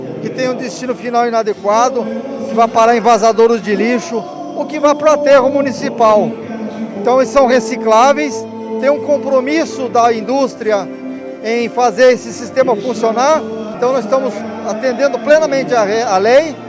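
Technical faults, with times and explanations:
Nothing technical jumps out here; the audio runs along without any faults worth pointing to.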